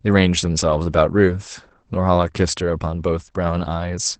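Throughout, the speech sounds muffled and slightly hoarse and robotic, with nothing above 8.8 kHz: Opus voice compression in SILK mode, at what sounds like roughly 12 kbps.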